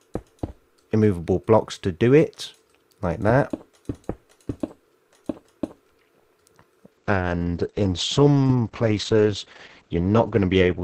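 A call bitrate drop begins at 6.97 s and lasts to the end: the encoder, starved of bits, codes coarsely and cuts the top band from 20 kHz to 8 kHz, leaving a rough, muffled sound that fits a fall from 48 kbps to around 9 kbps.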